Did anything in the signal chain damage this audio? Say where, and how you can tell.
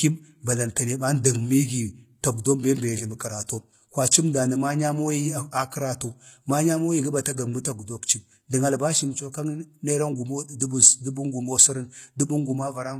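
Yes, at the codec stage, throughout the speech: the upper band sounds synthetic, with s sounds gritty and metallic over plainly audible coding damage, and nothing above 14.9 kHz. That points to likely HE-AAC compression near 20 kbps, where copied-up treble doesn't line up harmonically, unlike a plain low-pass, which would sound dull.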